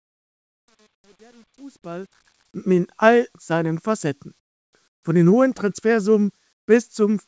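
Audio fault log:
0.00–2.45 s, truncation distortion on a fade: the fade-in is computed at a word length that fits about 9 bits, with no dither added, so the quietest part of the rise is forced onto a handful of coarse amplitude steps. From 0.00 to 2.05 s the waveform becomes blocky and square-edged, and the sound comes through gritty. It smooths out only as the level climbs at 2.45 s.
4.40–4.73 s, 4.88–5.03 s and 6.53–6.68 s, comfort noise in place of the background: the sound in these gaps is most likely not the real background but a generated stand-in. In a call the sender stops transmitting during pauses, and the receiver fills the gap with synthetic noise. The background here sits about 50 dB below the loudest passages, and each gap of 330 ms, 150 ms and 150 ms is a steady, featureless hiss, about 26, 19 and 20 dB lower than the room it replaces.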